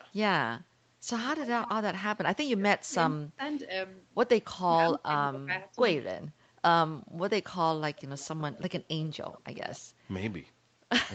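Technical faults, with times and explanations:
1.31–1.7 s, 8.18–8.72 s and 9.31–9.8 s, echo leak: a faint delayed copy of the speech trails it, 107 ms behind and about 15 dB down at first, then 98 ms behind and about 25 dB down, likely loudspeaker sound slipping past an echo canceller and sent back.
2.22–3.4 s and 4.79–5.51 s, speech suppressed in double talk: the speech sinks, by about 30 dB over roughly 0.7 s, then about 20 dB over about half a second, likely an echo canceller turning the talker down with the echo while both sides spoke.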